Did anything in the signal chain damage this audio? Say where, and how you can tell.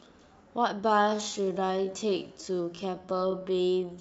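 Yes. Software time-stretching likely damaged the speech. From 0.83 s to the end at 4.0 s, a time-stretched section slows playback to about 0.62 times speed while pitch holds steady. Short pieces are being repeated to fill the length, so the speech drags after that sudden change of pace.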